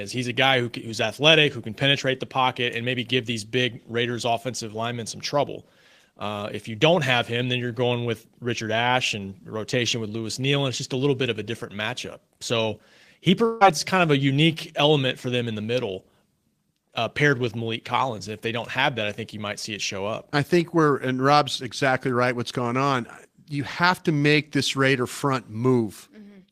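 At 13.45 to 13.63 s the speech breaks into a brief fading buzz before resuming at "kind of a unique", likely a long network dropout: about 160 ms never arrived and the receiver stretched the last sound over the gap. A spectrogram shows smeared, repeating bands that fade, then an abrupt clean restart.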